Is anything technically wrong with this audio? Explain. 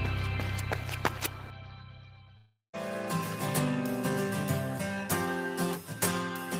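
Yes. From 2.37 to 2.75 s there is a long network dropout: the stream likely stopped arriving for 360 ms, so the receiver stretched the last sound into a fading buzz, which falls to silence for the final 120 ms before the audio resumes with that stretch missing.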